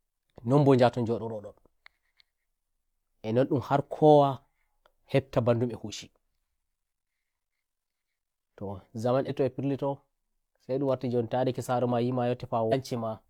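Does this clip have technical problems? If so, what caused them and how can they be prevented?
Yes: compressed frames were skipped twice. Whole frames of the encoded stream never reached playback, either missing from the file or rejected by the decoder as damaged. At 9.25 to 9.30 s the speech jumps ahead by roughly 300 ms, which points to about seven lost frames of around 46 ms each. At 12.68 to 12.73 s it jumps by roughly 200 ms, about four frames. Preventing this means storing and transmitting the file with integrity checks and error correction, and re-encoding from a clean source if corruption is found.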